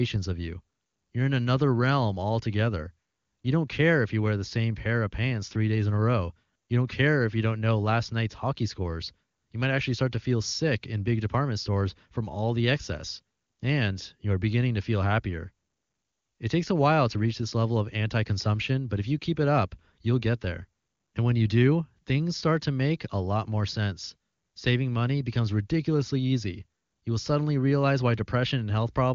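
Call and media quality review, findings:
Nothing to flag here: the speech shows the usual wideband ceiling at about 7.2 kHz, and any coding traces are faint at most, which fits an AMR wideband (HD Voice) path running at its top 23.85 kbit/s mode.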